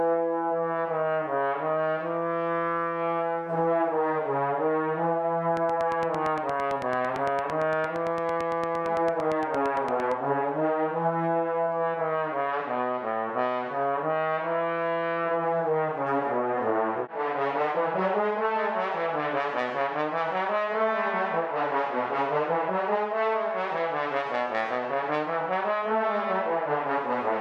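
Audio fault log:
5.57 to 10.13 s, train of clicks: a regular ticking at about 8.8 clicks per second, roughly forty in all, each peaking around 10 dB above the sound and audible in pauses too. Likely interference or a faulty connection or power supply injecting near-identical pulses. Spectrogram shows evenly spaced thin vertical broadband lines; waveform shows matching sharp spikes.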